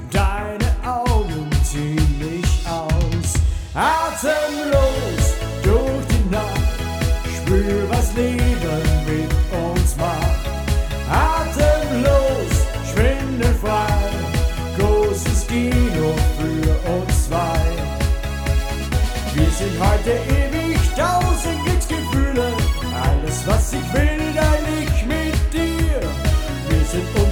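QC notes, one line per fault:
Nothing stood out on listening, and there is no fault to log.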